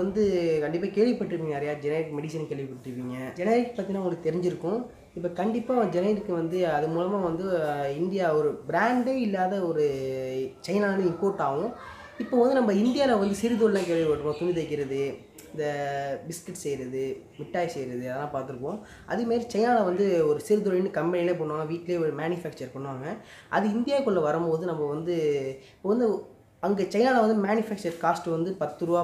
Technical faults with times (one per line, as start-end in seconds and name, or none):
none